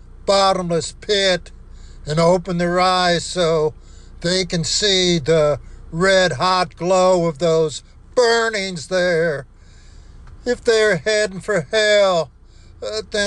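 Nothing here calls for comment, since there's nothing to flag anywhere in the recording.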